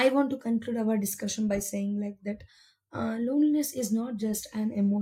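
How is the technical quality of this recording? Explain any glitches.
The recording has no technical glitches to report.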